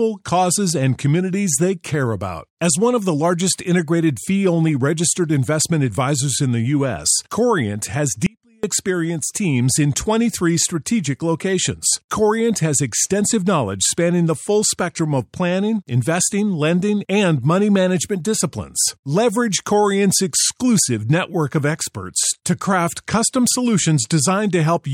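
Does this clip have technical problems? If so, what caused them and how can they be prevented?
Yes: an audio dropout to a faint residue from 8.26 to 8.64 s, just before "experienced teams in", likely a brief signal loss with the path left live. A faint sound about 35 dB down remains, and the abrupt cut sets it apart from a pause or fade. Secure connections and monitor levels during recording to prevent it.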